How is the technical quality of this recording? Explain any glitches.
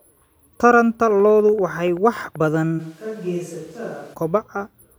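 The recording has two clear technical faults: a burst of regular clicking, then a stretch where the sound comes from the wrong microphone.

From 1.10 to 2.55 s there is a train of clicks: about fifteen sharp pulses at a steady 10.4 per second, peaking roughly as loud as the speech itself. The likely cause is interference from nearby equipment or a faulty connection or power supply, injecting the same pulse over and over. Unlike random crackle, the clicks share one shape, keep an even pace, and carry on through pauses.

From 2.81 to 4.13 s the speech takes on a switch to a distant microphone, likely because the close microphone's signal dropped out and a farther one, such as a camera's, took over. The level falls by about 10 dB, bass thins, the sound turns roomy and hollow, and background noise rises to roughly 25 dB below the speech. What sets this apart from added reverb or a simple level dip is the abrupt change in and back out, with tone, level and noise shifting together.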